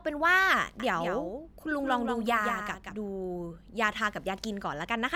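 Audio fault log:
0.80–2.96 s, doubled audio track: the speech gains a flat, dry second copy trailing about a fifth of a second behind, some 5 dB quieter, switching on and off abruptly. This is likely the same signal captured again through a slower path and mixed back in.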